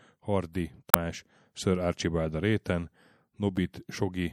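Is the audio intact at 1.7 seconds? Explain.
No. MP3 compression damage is plainly audible at 1.7 s and throughout the speech. Sibilants chirp metallically and swirl, likely from low-bitrate encoding around 64 kbps zeroing weak frequency lines.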